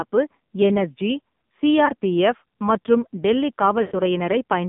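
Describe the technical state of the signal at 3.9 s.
Lost AMR speech frames cover 3.82 to 4.02 s, just after "மற்றும் டெல்லி", so 3.9 s falls inside the gap. The frames failed their error check, and the decoder filled the gap by repeating its last good pitch and vocal-tract settings at falling gain. The sound is drawn out and fades toward silence. About 100 ms of audio is missing, which fits five lost 20 ms frames. When the audio resumes near 4.02 s, it is briefly weak or rough.

This happens on top of heavy AMR narrowband mobile codec damage, which runs through the whole clip. The line passes only about 150 Hz to 3.6 kHz, and nothing above 4 kHz survives. The codec rebuilds the signal from a vocal-tract model driven by a few pulses per subframe. At this low rate, which points to about 5.9 kbps, the result sounds buzzy and synthetic.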